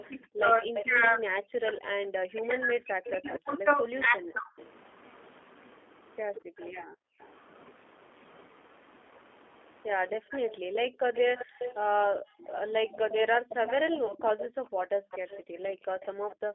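Speech carried over a G.729 call, and the codec damage is plainly audible from start to finish. The line band runs from about 250 Hz to 3.5 kHz, so the voice is thin and boxy with no top end. At 8 kbit/s the coder rebuilds each short frame from a vocal tract filter, a pitch predictor and a few pulses. That gives the voice a rough, slightly synthetic, buzzy texture. Any background warbles rather than sounding natural. From 0.0 to 4.67 s there is an echo leak. A second copy of the voice trails the first by 233 ms, sitting roughly 10 dB below it. It sounds like a faint, delayed shadow. The likely cause is a far end on a loudspeaker whose echo canceller failed to strip out what its microphone picked up, so that sound came back down the line. Over nearly the same span, 0.09 to 4.51 s, the main voice keeps sinking and breaking up. The deepest dips are severe, around 40 dB, and the affected pieces add up to about three seconds. 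This is speech suppressed in double talk. Both ends were likely sounding at once, and the canceller could not tell its own talker from the echo. It turned everything down together. From 6.84 to 7.19 s the room sound is abruptly pulled down by about 40 dB and then comes back. That is background gated by the echo canceller. It clamped the microphone hard while the loudspeaker was active and released it once the loudspeaker stopped. At 14.06 to 14.13 s there is a short patch of VoIP packet loss concealed by the speech codec. About 30 ms of audio went missing, which fits one lost packet. The decoder filled the gap by extending the last pitch and filter with falling gain. The result is a brief buzzy smear rather than silence. The sound stays weak and off-colour for a moment after the stream resumes, because each frame is rebuilt from the one before it.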